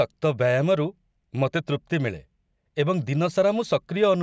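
No technical faults are audible anywhere in this speech recording.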